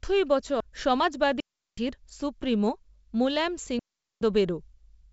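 At 0.60 s there's a CD skip: the laser jumped to another turn of the disc's spiral, so you get a tick from a mute of just a few milliseconds, then the speech carries on from a different point, jumping forward or back by a disc turn or so.

Then come two digital wireless dropouts, from 1.40 to 1.78 s (about 374 ms) and from 3.79 to 4.21 s (about 422 ms). The receiver lost too much of the link's data and muted with a very short fade, leaving clean holes of near silence with no noise burst on either side. The wideband telephone coding around them sounds clear.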